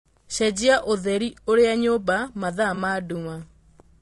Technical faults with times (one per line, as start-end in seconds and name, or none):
0.00-4.02 low-delay AAC compression
2.75-2.78 AAC frame loss with concealment